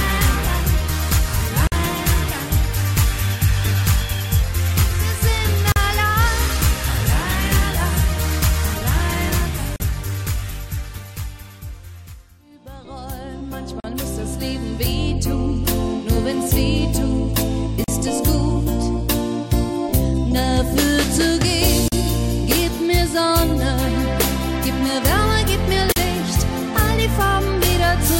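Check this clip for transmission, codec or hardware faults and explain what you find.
Separately encoded pieces were joined without trimming, leaving gaps at each join at 1.67, 5.72, 9.76, 13.80, 17.84, 21.88 and 25.92 s, one every 4.0 s. Each encoder run's start-up delay and padded final frame stayed in the stream, so a gap sits where pieces meet: about 49 ms at the first join, 40 ms at the rest. The sound drops out, edges smeared by the codec, then resumes exactly where it stopped.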